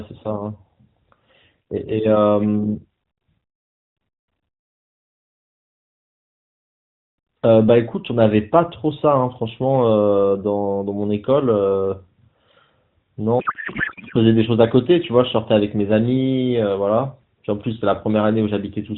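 From 13.40 to 14.16 s, a codec payload misread replaces the speech with garbled noise and warble that barely tracks it. The decoder is reading AMR frames with fields shifted, consistent with octet-aligned packing parsed as bandwidth-efficient. The surrounding narrowband AMR sound fits roughly 12.2 kbps.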